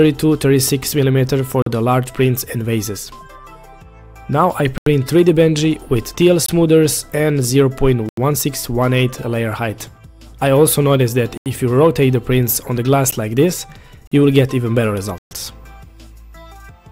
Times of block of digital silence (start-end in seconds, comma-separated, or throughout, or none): 1.62-1.66, 4.78-4.86, 6.46-6.49, 8.09-8.17, 11.37-11.46, 13.11, 14.07-14.12, 15.18-15.31